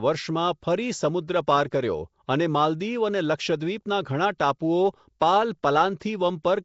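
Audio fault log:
throughout, Nellymoser compression: The speech carries a rough, hissy halo and a smeared, underwater quality, with plainly audible codec damage and nothing heard above 7.7 kHz. This is likely Nellymoser Asao, the old Flash microphone codec, which gives every block of samples the same small bit budget. Bands too weak to earn bits are replaced with noise, which produces the hiss and blur, and the damage level fits a bitrate of about 32 kbps.
1.71, 4.38, 5.20 and 5.63, pre-echo: Just before four sharp onsets, a brief hiss creeps in and softens the attack. The first comes between "સમુદ્ર પાર" and "કર્યો અને માલદીવ". The smear lasts 11, 18, 12 and 10 ms respectively. The codec spreads its quantisation noise across a whole transform block, so when a loud attack lands late in a block, noise sized for that attack also fills the quiet moment before it.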